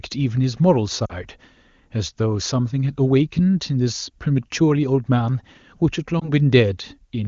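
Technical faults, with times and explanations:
1.05–1.13 s and 6.19–6.32 s, lost AMR speech frames: radio errors corrupted wideband speech frames, so the decoder repeated the last good settings at falling gain, producing brief warbling dips.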